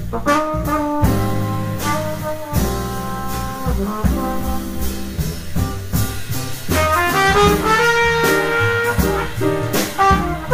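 Nothing in the audio stood out as a technical problem on listening.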